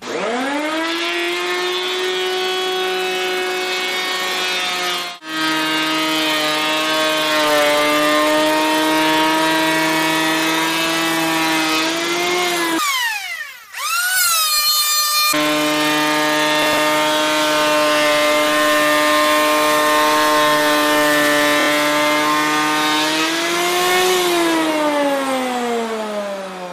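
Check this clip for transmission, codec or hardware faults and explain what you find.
Two faults turn up: repeated frames, heard twice, and one burst of processor overload crackle.

Repeated frames: at 1.16 to 1.27 s the sound stutters as one 26.1 ms block plays four extra times, adding 104.5 ms. At 21.59 to 21.67 s the same block length repeats three extra times, adding 78.4 ms. A compressed frame was written or sent again, so the decoder replayed it.

Processor overload crackle: from 16.63 to 16.78 s a short burst of gritty crackle rides on the sound, then stops. The processor missed about five buffer deadlines in a row, and each missed buffer was skipped, leaving tiny hard-edged gaps. The spacing fits buffers of around 5 ms.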